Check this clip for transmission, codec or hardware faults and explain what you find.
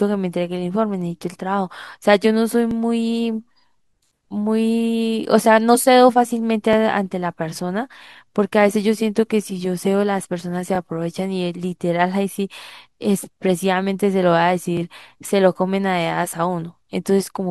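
The speech has one fault, overlapping chunks, at 2.71–2.73, 6.73–6.75, 10.75–10.77 and 14.77–14.79 s. Each chunk began 20 ms early, replaying audio as a brief stutter every 4.0 s. Nothing is lost, unlike a dropout, and the strict regularity rules out random packet loss.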